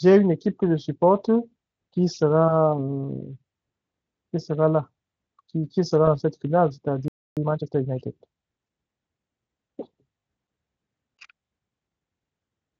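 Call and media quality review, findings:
VoIP packet loss concealed by the speech codec, 6.05–6.08 s: brief stretched, fading smear where audio should continue, about 20 ms missing, which fits one lost frame. Decoder extrapolates last pitch and filter at falling gain; the Speex path shows at most faint damage around it.

VoIP packet loss concealed by the speech codec, 8.66–8.68 s: same short stretched smear, again about 20 ms, consistent with a single dropped frame. Concealment fills the gap from the preceding frame's parameters.

Playback stall, 7.08–7.37 s: output stops mid-flow, about 0.29 s of silence, then resumes. Likely cause: jitter buffer or player starved of data, or audio thread blocked, leaving the device with nothing to play.

Time-compressed catch-up, 7.37–7.93 s: audio hurried at 1.5x, pitch unchanged. Player trims its backlog after the stall by cutting small segments and cross-fading the joins, shortening the accumulated delay.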